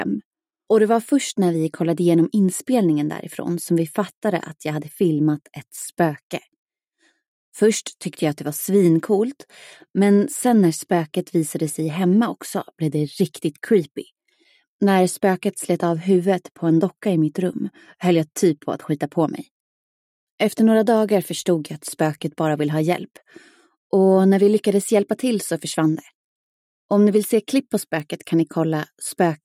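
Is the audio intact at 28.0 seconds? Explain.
No. At 28.00 s a bit error spike breaks the audio for a single sample: one bit in the stored or transmitted value flipped, so that sample jumped by a power of two and the next sample returned to normal. It is heard as one sharp, isolated tick unrelated to the surrounding sound. On a waveform it appears as a lone vertical needle; on a spectrogram, a thin full-height line across all frequencies.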